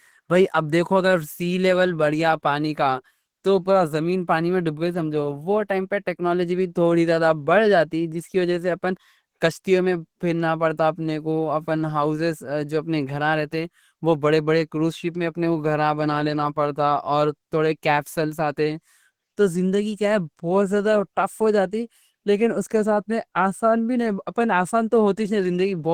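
Speech with plainly audible Opus compression throughout: a hoarse, grainy texture, likely from hybrid-mode coding near 16 kbps. Unlike MP3, there is less swirling, and the band reaches 20.2 kHz.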